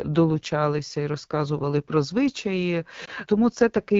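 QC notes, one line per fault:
throughout: AMR wideband (HD Voice) codec. The speech has a plainly audible rough, raspy texture, which fits AMR-WB at a low mode near 8.85 kbit/s. The pulse-driven vocal tract model is starved of bits, so the excitation sounds coarse, and the band above 6.4 kHz is synthetic shaped noise.
3.05–3.10 s: lost AMR speech frames. Just after "і розказували про звичаї" there is a brief dip or warble about 20 ms long, consistent with a single lost frame. The decoder repeated the previous pitch and vocal tract settings at reduced gain, then resumed briefly weak or rough.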